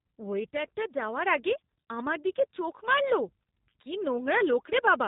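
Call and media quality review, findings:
G.729 codec damage, whole clip, plainly audible. Speech band-limited, nothing above 4 kHz; sibilants dull. Rough, buzzy, slightly synthetic timbre, consistent with an 8 kbit/s G.729A leg. Mechanism: speech rebuilt from a vocal tract filter, pitch predictor and sparse pulse excitation per 10 ms frame; fine detail and top band discarded. Probable component: narrowband VoIP trunk or transcoding gateway.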